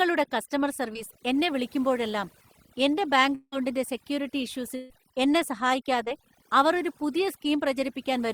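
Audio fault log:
Throughout, overdone noise removal: the background sits near silence, broken by small twinkling specks. An over-aggressive noise reducer pushes individual frequency bands down or off whenever they come close to its noise estimate, taking the quieter parts of the speech with them. On a spectrogram the floor is dark and patchy, dotted with isolated bright points, and the weaker harmonics and fricative energy break up into fragments.
0.93–0.97 s and 6.04–6.08 s, short concealed packet loss: each time about 20 ms of audio never arrived and the receiver bridged the hole, with about 14 ms of fill before "എന്നെ വിളിക്കുമ്പോഴെല്ലാം" and about 24 ms before "അവർ ഒരു പുതിയ". The fill continues the previous sound, then blends back into the real signal, so each gap is heard as a tiny smear or wobble. The waveform shows a brief, overly regular stretch, and the spectrogram shows a slight blur across the joins.
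3.35–3.54 s, long network dropout: about 180 ms of audio is gone. For roughly 170 ms the last sound carries on as a fading buzz or hiss, and then about 40 ms of silence follows before the speech resumes further along, with the lost part never heard. The likely cause is a stretch in which no packets reached the receiver. On the waveform the envelope decays to a flat gap, and the spectrogram shows smeared, frozen harmonics fading into an empty band.
4.76–4.92 s, burst of packet loss: about 140 ms went missing in a run of lost or late packets, and roughly 139 ms of it was concealed, with no silent stretch. The receiver repeated the last sound while turning it down, so it comes across as a held, dimming buzz or a fading hiss, and the speech then picks up further on with the material in between absent. The spectrogram shows an unchanging stretch fading out, and the waveform shows a shrinking envelope before normal speech returns.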